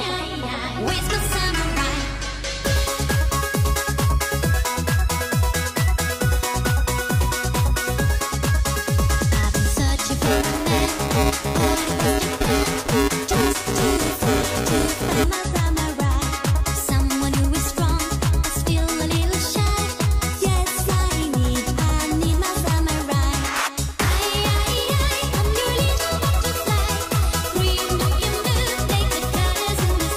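The audio has buffer tearing from 10.24 to 15.24 s: a robotic 345 Hz buzz, which fits a 128-sample buffer, as writer and reader cross each period and splice in audio a few milliseconds stale. Spectrograms show harmonic lines at 345 Hz spacing; waveforms show regular hard discontinuities.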